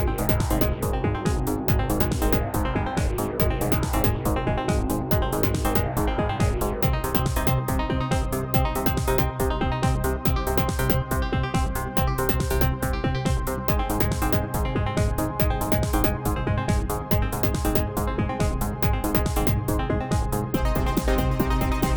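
No technical faults can be heard anywhere in this audio. Nothing in the sound calls for a timestamp or an explanation.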